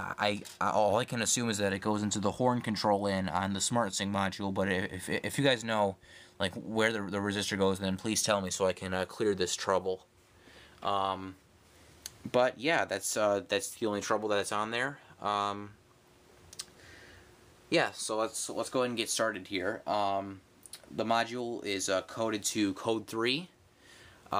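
Nothing stood out as a technical fault on listening.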